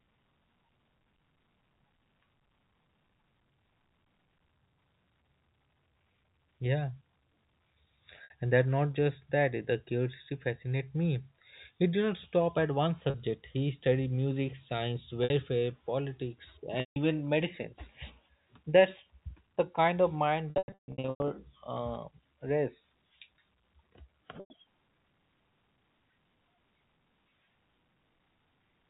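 Packet loss with pitch repetition breaks up this speech at 8.24, 13.1, 15.24, 16.8 and 24.4 s, gaps of 60, 40, 60, 160 and 100 ms that fit lost 20 ms packets. Heavier loss is scattered from 20.5 to 21.3 s, 580 ms missing in runs up to 140 ms. The receiver loops the last pitch period, so short gaps sound like a held, buzzy note. Longer ones fade to silence before speech cross-fades back in, all within the 4 kHz telephone band.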